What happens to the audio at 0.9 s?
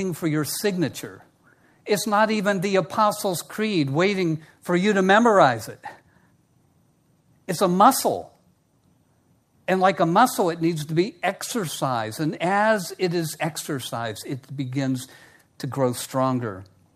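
Nothing goes wrong at 0.9 s; the speech carries on intact through that moment, with no dropout, click or distortion.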